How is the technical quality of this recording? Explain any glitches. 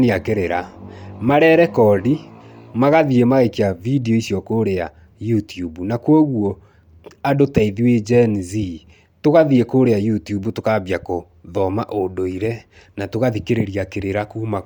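Technical quality is held back by plainly audible codec damage that runs through the whole recording. The speech carries a breathy, grainy edge in its upper range throughout, likely from Bluetooth LC3 compression. The transform codec discards much of the high spectrum and refills it with shaped noise, which fits a rate near 48 kbps with 10 ms frames. Content still extends to about 20.2 kHz.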